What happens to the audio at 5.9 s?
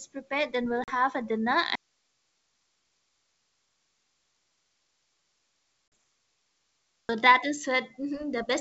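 At 5.9 s you're in the middle of an audio dropout to a faint residue that runs from 1.75 s to 7.09 s, about 5.3 s in all. The speech cuts out abruptly rather than pausing or fading, and what's left is just hiss, roughly 55 dB below the normal signal. That points to the signal likely being lost upstream while the path after the break stayed live, so you hear the open channel's noise floor instead of the talker.

Sitting inside that gap, from 5.88 s to 5.92 s, there's packet loss on an ADPCM call: a 40 ms hole, which fits about two lost packets, filled with silence. With nothing to decode, the receiver's adaptive predictor and step size drift out of step with the sender's. Here it lands during the dropout, so what you actually notice is a hard-edged break in the hiss rather than damaged speech.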